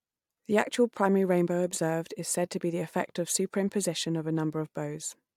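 No technical faults can be heard anywhere in the speech recording. There is nothing to mark at any point in its timeline.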